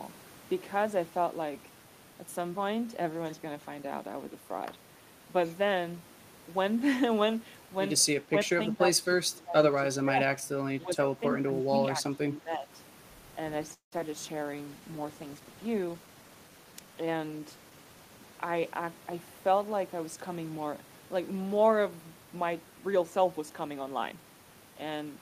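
From 8.22 to 12.69 s the speech dips repeatedly: 8.22–9.58, 9.9–10.21, 10.83–11.21, 11.42–11.64 and 11.81–12.69 s. Level falls by up to about 20 dB, at worst for around a second. This is likely speech suppressed in double talk. The echo canceller mistook the talker for echo and pulled everything down.

At 13.73–14.16 s comes repeated packet loss, with a robotic sound. Holes keep arriving close together. The longest lasts nearly 0.19 s. Each is patched by stretching the last sound, so about half the stretch is synthetic. It turns choppy.

Right after, at 14.34–14.56 s, a jitter buffer slow-down adds about 41 ms. The receiver repeats pitch periods to rebuild its reserve. The sound runs at 85% speed, drawn out, with pitch unchanged.

From 14.66 to 18.77 s a call bitrate drop makes the sound rougher and more watery for about 4.1 s. This points to the encoder falling from around 32 kbps to about 18 kbps. 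Coarser coding costs detail.

Inside that, at 15.80–16.94 s, a jitter buffer speed-up trims short pitch-period pieces, roughly a fifth of a second in total. The buffer was holding too much audio. The sound runs at 115% speed and feels hurried, but keeps its pitch.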